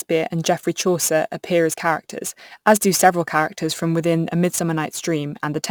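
A gritty, inharmonic fizz rides on the speech from start to finish, strongest on loud and sibilant moments and sitting roughly 20 dB below the voice. This is crude rate conversion: samples were simply repeated to stretch the rate, which fits 44.1 kHz to 48 kHz.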